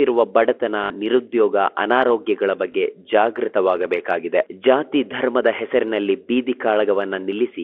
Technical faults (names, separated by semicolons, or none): packet loss with last packet repeated